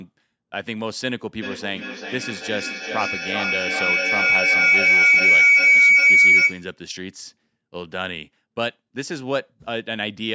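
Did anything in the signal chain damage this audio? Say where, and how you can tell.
Yes. Two devices on the same call were in one room, closing an acoustic feedback loop with gain above unity between microphone and loudspeaker. From 1.41 s to 6.78 s, each pass round the loop came back louder and narrower until it settled into a feedback howl near 2 kHz, pulsing roughly every 400 ms at the loop's delay. It peaks about 13 dB above the speech. The call's microphone processing carries it, with nothing above 8 kHz.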